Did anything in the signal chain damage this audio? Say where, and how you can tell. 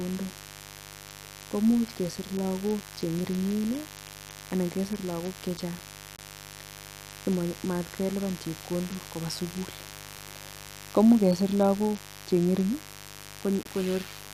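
Yes. In the analogue wiring, switching spikes entering twice per 50 Hz cycle, through a dimmer, rectifier or unshielded run, lay a steady, raspy mains buzz under the whole speech clip. Its harmonics climb into the kilohertz range, sitting only about 15 dB below the signal.

In the codec stage, bit errors made the decoder reject damaged frames, and the player substituted silence. This corrupt frame muting cuts abrupt holes at 6.16–6.19 s (one frame) and 13.63–13.68 s (two frames), while timing stays intact.

Also in the codec, a corrupted frame was decoded rather than rejected. Just after "simatkelipan chepkondok kopaa sikul", at 10.16–10.20 s, misread codes spread energy at wrong frequencies across roughly two frame lengths. This corrupt frame decoding is heard as a brief chirp, squeak, blip or burst of noise peaking around −15 dBFS.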